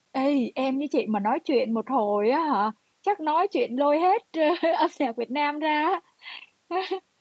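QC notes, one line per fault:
No faults found: the speech has passed through call microphone processing and a WebRTC call path, and its content stops at about 8 kHz, as expected for that route.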